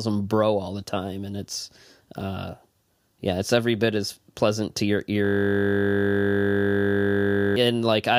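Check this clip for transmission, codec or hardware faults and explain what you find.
One hardware fault is present. From 5.25 s to 7.56 s the speech gives way to a steady 50 Hz buzz: a system hang loop, where the system froze while the audio hardware kept replaying the same 20 ms buffer, over a hundred times in succession.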